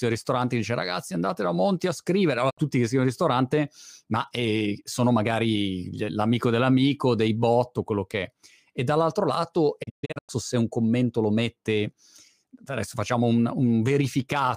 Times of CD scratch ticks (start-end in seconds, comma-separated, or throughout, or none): none